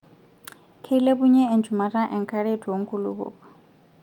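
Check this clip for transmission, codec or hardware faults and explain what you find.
No faults can be heard.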